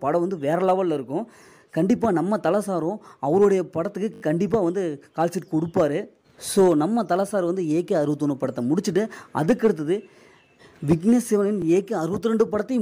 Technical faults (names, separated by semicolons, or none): repeated buffer